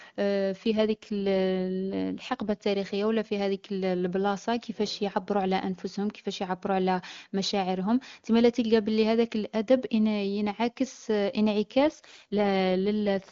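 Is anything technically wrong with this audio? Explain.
Yes. An AMR rate drop occurs from 0.66 to 2.64 s and again from 11.79 s to the end. On a weak link, the wideband AMR codec is switched to a lower rate to spend bits on error protection. The speech turns rough and synthetic but keeps its bandwidth without gaps, which fits a step from 23.85 to 8.85 kbit/s. Between the drops the HD Voice coding sounds clean.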